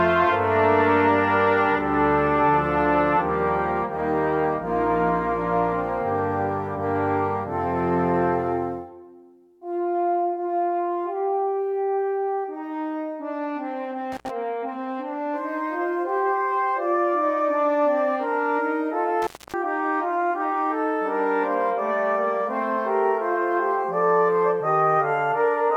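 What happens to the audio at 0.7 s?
Nothing goes wrong at 0.7 s; the audio there is intact, with no dropout, click or other fault.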